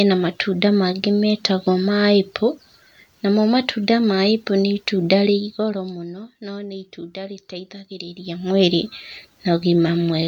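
Zipper noise runs from 5.14 to 6.05 s in this speech clip, while the level falls by roughly 15 dB. Instead of gliding, the gain drops in discrete jumps, about a hundred each second, with no smoothing between them, so every jump puts a tiny click into the waveform. Strung together, those clicks form a fine ticking buzz that rides on the speech for as long as the fade lasts.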